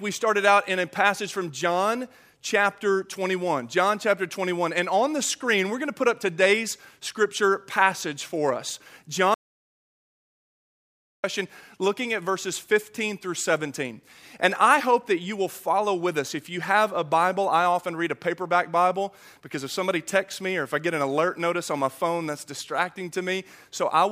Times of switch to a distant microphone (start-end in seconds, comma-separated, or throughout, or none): none